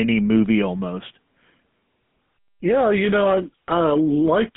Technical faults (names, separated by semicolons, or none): GSM full-rate codec